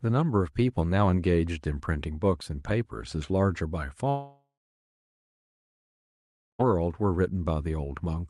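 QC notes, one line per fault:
4.09–6.61 s, long network dropout: the last sound trails off as a fading buzz or hiss, then about 2.1 s of silence before speech returns, likely from lost packets.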